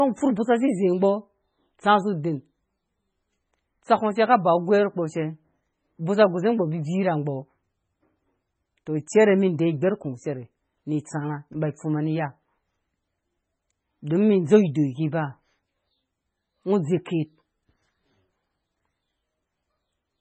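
Throughout the speech, the treble stops dead at about 8.3 kHz, and the sound is watery and swirling, with metallic chirps on s sounds and smeared attacks. This is heavy damage, likely from MP3 compression at a very low bitrate, which fits roughly 16 kbps. A spectrogram shows a hard ceiling with flickering, patchy holes below it.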